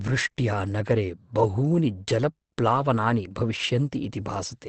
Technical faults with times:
0.00-4.68 Opus compression

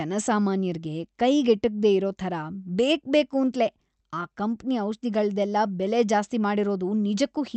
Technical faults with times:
none

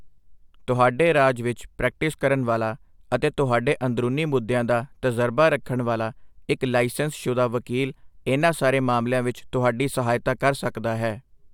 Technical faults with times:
none

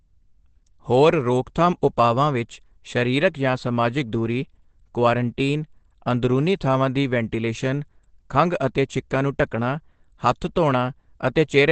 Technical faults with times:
0.00-11.71 Opus compression

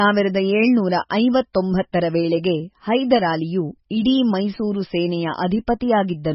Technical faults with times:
0.00-6.34 MP3 compression

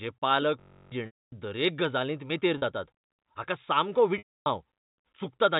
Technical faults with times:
0.60-0.92 system hang loop
1.06-1.32 packet loss with pitch repetition
2.58-2.62 packet loss with pitch repetition
4.18-4.46 packet loss with pitch repetition

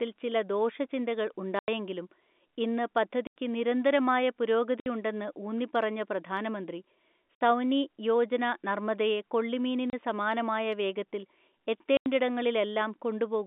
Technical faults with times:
1.59-1.68 packet loss filled with silence
3.27-3.34 packet loss filled with silence
4.80-4.86 packet loss filled with silence
7.35-7.41 packet loss filled with silence
9.90-9.93 packet loss filled with silence
11.97-12.06 packet loss filled with silence

